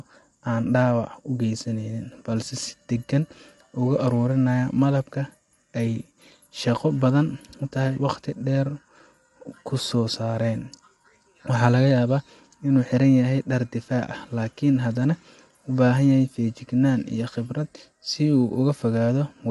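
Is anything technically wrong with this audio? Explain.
Yes. Throughout the speech, the signal has likely passed through low-delay AAC compression of the AAC-ELD kind used for video calls. Its short frames of about 500 frequency lines separate the voice's harmonics poorly and spend bits inefficiently, and the plainly audible damage fits a bitrate around 32 kbps. The voice sounds rough and grainy, with noise filling the gaps between harmonics, and nothing remains above 11.5 kHz, so the top end is cut off.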